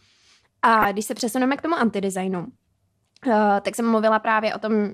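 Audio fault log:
0.78–0.85 s and 3.74–3.76 s, DAB burbling. Brief noise blips cut across the speech. Weak reception let bit errors, a few tenths of a percent, past error correction into the MP2 data. Corrupted scale factors make single sub-bands jump for up to a frame.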